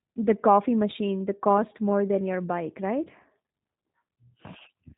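From start to end, the speech carries G.729 codec damage. It sounds like G.729A at roughly 8 kbit/s. Each 10 ms frame is rebuilt from a vocal tract model and a few pulses. Nothing above 4 kHz survives. The speech sounds muffled, rough and slightly synthetic.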